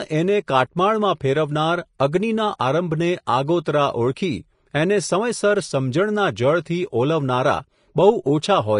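This is a speech clip with plainly audible codec damage throughout, likely from Vorbis compression. Nothing sounds above 10.5 kHz, and the treble turns hissy and grainy, which fits a low bitrate around 33 kbps. At 1.99 s there is pre-echo. A short hiss of about 12 ms runs ahead of a sharp onset, because quantisation noise spreads across the whole block and softens the attack.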